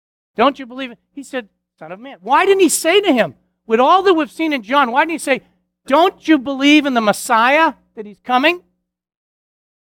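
No technical faults can be heard anywhere in this speech recording, so there are none to describe in time order.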